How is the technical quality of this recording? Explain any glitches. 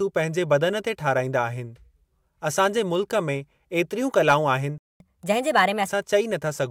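The recording has two linked playback glitches in this speech clip, both right after "कलाऊं आहिनि".

From 4.78 to 5.00 s there is a playback stall: the sound cuts out mid-flow for 0.22 s, then resumes where it stopped. The likely cause is the player running short of data or its thread being blocked. It is a gap with no lost material, not a dropout that skips ahead.

From 5.00 to 5.89 s comes catch-up at higher speed. The player resamples its backlog at 1.25 times normal speed, so the speech runs faster and sounds about four semitones higher, then settles back. Pitch and tempo rise together, which distinguishes it from time-stretching.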